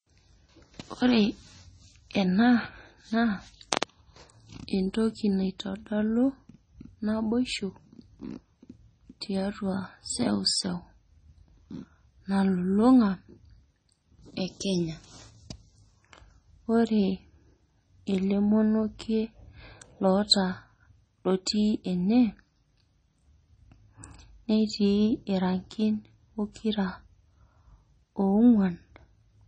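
Throughout the speech, the sound is watery and swirly, with everything above 9 kHz missing, which fits heavy MP3 compression at a low bitrate around 24 kbps as the likely cause. On a spectrogram the top stops at a hard ceiling, and weak patches below it flicker on and off between frames.

At 21.46 s there is pre-echo: the codec has spread noise meant for a sharp attack across the quiet moment just before it, leaving about 10 ms of hiss ahead of the onset. A waveform shows a low smear leading into the transient, and the attack itself sounds softened.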